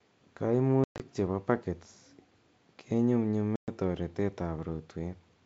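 Packet loss on an ADPCM call at 0.84–1.02 s and 3.56–3.69 s. About 140 ms and 120 ms of speech drop to hard-edged silence. The decoder's predictor and step size drift from the sender's, so speech resumes with brief distortion.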